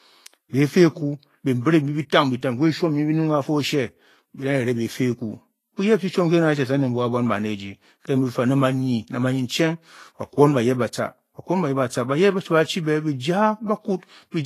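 Vorbis compression runs throughout this speech recording: nothing sounds above 14.2 kHz, and the treble turns grainy and hissy, likely from coarse quantisation at a bitrate that fits about 32 kbps.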